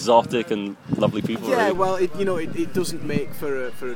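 At 1.75 s a DC step occurs: the waveform's zero line abruptly jumps to an offset of about -28 dBFS, as if an input carrying a constant voltage had been switched in or a converter had recalibrated. The offset then holds until the clip ends. It is heard as a single low thump or click while the sound continues unchanged. On the waveform the whole trace shifts off centre at that instant; a spectrogram shows a brief broadband vertical stripe there, followed by steady energy at 0 Hz.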